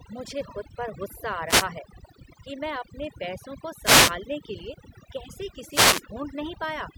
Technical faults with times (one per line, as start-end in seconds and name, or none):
0.00-6.97 overdone noise removal